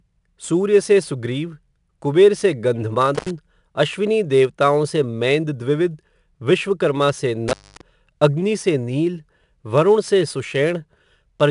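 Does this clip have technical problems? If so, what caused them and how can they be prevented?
Yes, there are two problems. The whole thing has been through 4-bit ADPCM compression. Each sample is stored as a coarse 4-bit step from a prediction, so the speech carries a gritty hiss that rises and falls with its level, and sharp attacks distort. Nothing reaches above 10.6 kHz, which fits a stream around 89 kbps and makes it sound a bit dull. To avoid it, record and deliver with PCM or a modern codec at a decent rate.

There's also an intermittent contact, where a loose cable or plug briefly opens. It cuts out from 3.15 to 3.31 s, with the line dead for about 78 ms, and again from 7.48 to 7.81 s, dead for about 232 ms. Each dropout has crackle at the edges and faint hiss underneath. Check and reseat the connectors, or swap out the suspect cable, before recording.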